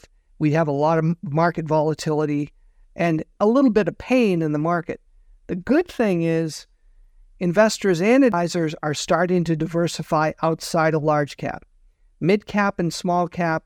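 A speech clip with one fault: damaged data in a compressed stream. Between 8.30 and 8.33 s, after "investors and" and before "are starting to diversify", a brief blip cuts through. Corrupted bytes there made the decoder misread frames and lose sync.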